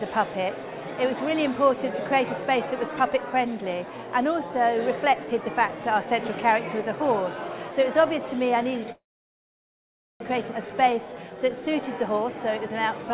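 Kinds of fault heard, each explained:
Call audio freeze: At 8.92 s the sound breaks off, trails away in a short concealment tail, then falls silent for about 1.2 s before resuming at 10.22 s exactly where it stopped. Nothing is skipped; everything afterwards simply arrives about 1.28 s late. This points to a hold-up in delivery, likely packets stalled in transit so the call's jitter buffer ran dry and the receiver could only pad the gap.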